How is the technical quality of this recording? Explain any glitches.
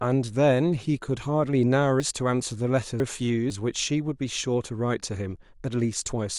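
There's one real glitch in the speech. From 2.0 to 3.5 s, chunks play out of order: a 500 ms chunk lands two chunks late, so that stretch jumbles, with three hard joins.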